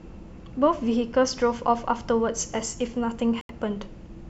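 At 3.41 s the speech drops to about 80 ms of clean silence and returns by 3.51 s. This is a Bluetooth stall, likely caused by interference holding up packets until the headphones' buffer ran dry. Unlike a concealed codec dropout, the gap holds no smeared or repeated fill.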